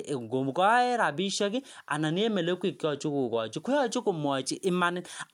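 No technical fault can be heard in this speech recording at any point.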